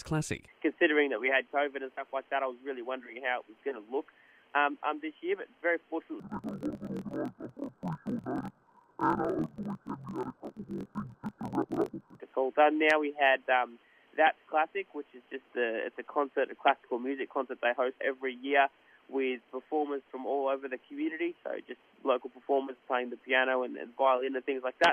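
From 6.20 to 12.20 s, interleaved audio is read as planar. Each 24 ms block's alternating samples are split into halves that play together at half speed. The sound drops an octave, with a block-rate pattern near 41.7 Hz.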